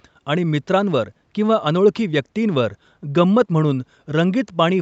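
Nothing stood out on listening to this speech, which carries the 8 kHz upper limit expected from a call path.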